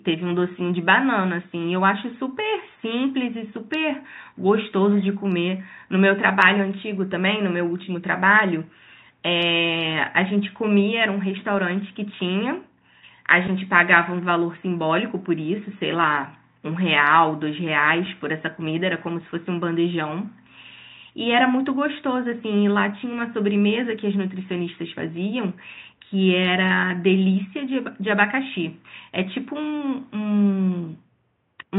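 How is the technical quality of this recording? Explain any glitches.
The technical quality of this recording holds up, with no glitches to explain.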